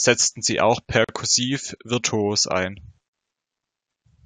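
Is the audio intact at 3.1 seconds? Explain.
No. A gap at a join of encoded pieces opens from 3.09 to 3.14 s, just after "virtuos ein": a 48 ms gap, left by encoder padding where separately encoded segments were joined untrimmed, with smeared edges.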